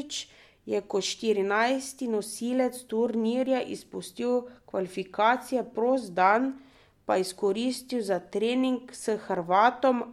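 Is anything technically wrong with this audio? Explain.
No, nothing is technically wrong with this audio.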